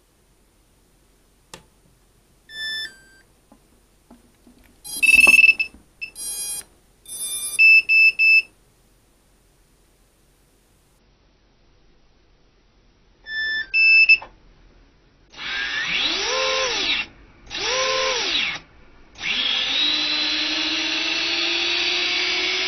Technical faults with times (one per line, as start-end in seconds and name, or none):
10.99-22.68 adaptive stream at a lower bitrate